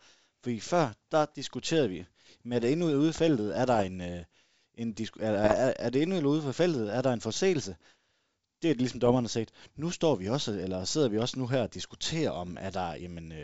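A speech clip carried over a G.722 wideband link. Bit errors on an ADPCM link cause pops and rough bursts at 3.64 to 3.84 s, 5.44 to 5.61 s, 9.06 to 9.17 s and 12.42 to 12.59 s. Each flipped bit throws off the decoder's step size and predictor. So the damage smears on briefly, with short level jumps. The error rate is well under one percent.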